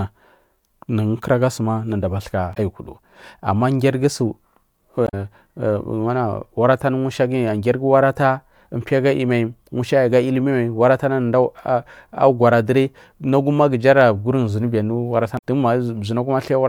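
Damaged data in a compressed stream hits the speech at 2.51 to 2.57 s, 5.05 to 5.14 s and 15.35 to 15.44 s. Corrupted bytes make the decoder misread frames and lose sync until it finds the next frame header, producing brief chirps or squawks.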